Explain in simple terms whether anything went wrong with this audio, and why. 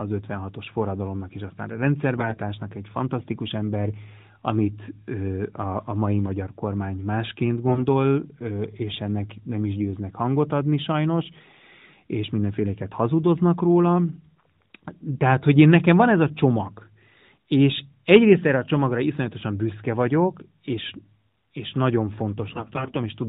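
Yes. Three short bursts of AMR bit errors occur, at 2.16 to 2.40 s, 7.68 to 7.87 s and 22.48 to 22.97 s. Some less protected bits of the mobile signal flipped in transit. The speech keeps its pitch and loudness but turns hoarse and gargly. The last burst is longest.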